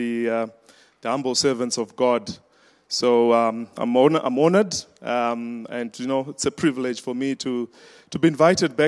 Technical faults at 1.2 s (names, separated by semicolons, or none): none